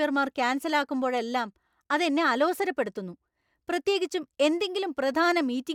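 No technical faults are audible anywhere in the speech recording.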